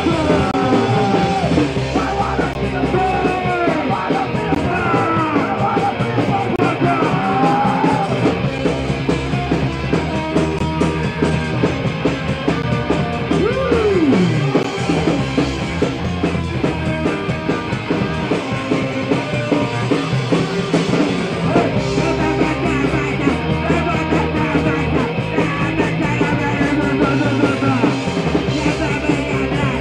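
Short hard-edged silences cut into the audio every 2 s, at 0.51–0.54, 2.53, 4.55, 6.56–6.59, 8.58, 10.59, 12.62 and 14.63 s: a gap between stream segments. Each 2 s segment's timestamps leave a 6 to 28 ms hole, which the player fills with silence.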